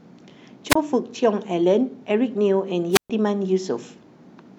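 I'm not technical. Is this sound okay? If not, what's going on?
No, there are two short gaps in the speech, and both are a wireless microphone squelch dropout. At about 0.69 s, and again from about 2.91 to 3.10 s, the radio link from the mic weakens, a little hiss creeps in, and the receiver mutes itself to hide the static. The first silence is tiny, around 26 ms, but the second lasts about 128 ms.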